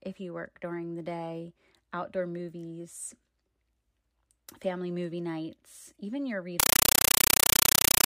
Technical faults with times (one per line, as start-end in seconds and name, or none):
6.60-8.08 compressed stream played as audio